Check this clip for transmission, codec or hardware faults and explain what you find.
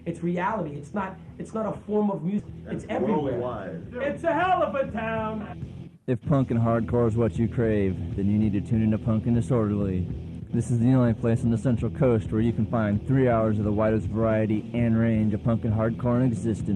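Two transmission faults are audible.

From 2.39 to 2.41 s there is a skip ahead. About a second of audio was dropped while later audio was already queued. Playback jumps forward with no gap. The two sides join almost directly, so a chunk of sound simply vanishes.

From 3.91 to 5.22 s there is a jitter buffer speed-up. The buffer had built up extra delay, so the receiver cut short pitch-period pieces repeatedly, about 50 ms in total. The audio runs 4% faster at unchanged pitch.

Both faults sit on a call-codec path whose top end stops near 12 kHz, which fits Opus at around 32 kbps.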